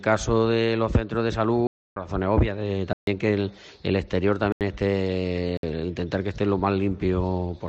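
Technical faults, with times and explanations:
1.67–1.96 s, 2.93–3.07 s, 4.52–4.61 s and 5.57–5.63 s: blocks of digital silence. The audio drops to silence four times, for 293 ms, 142 ms, 85 ms and 59 ms. Each gap starts and ends abruptly with no fade. The two longer gaps sound like holes. The two shorter ones sound like shorter holes. The 85 ms gap fits a 4096-sample block, pointing to output buffers that were not filled in time.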